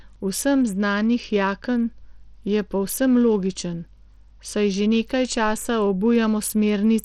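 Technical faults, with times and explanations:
Throughout, Bluetooth SBC compression: plainly audible grit on the speech, and treble that drops out or flickers, likely from coarse SBC quantisation near 80 kbps.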